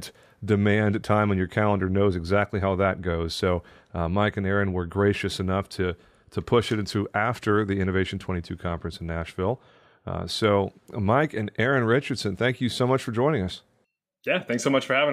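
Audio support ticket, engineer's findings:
No audible faults found on review.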